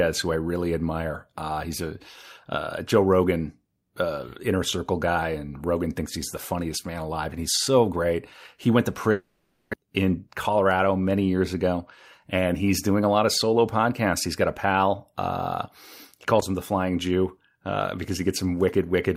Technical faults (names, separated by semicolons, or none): long network dropout